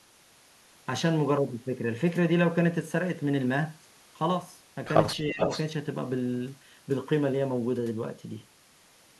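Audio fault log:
5.22–5.39 s, speech suppressed in double talk: with both ends likely talking at once, the echo canceller treated this side's speech as loudspeaker echo and turned it down, so the speech dips by roughly 10 dB for about 150 ms before recovering.
5.39–5.62 s, echo leak: the far end's echo canceller likely failed to remove what its microphone caught from its loudspeaker, so a copy of this side's speech returns about 408 ms late, only around 5 dB below the direct speech.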